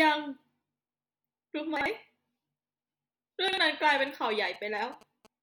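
Speech with chunks out of order at 1.77 to 1.86 s and 3.48 to 3.58 s, where one 46 ms chunk plays a slot late, giving a jumbled moment with nothing missing, unlike a dropout. From 3.84 to 5.27 s, GSM signalling bursts from a nearby 2G phone add a galloping pattern of 217 Hz buzzes, roughly 25 dB below the speech, which stands apart from steady mains hum because it comes and goes in bursts.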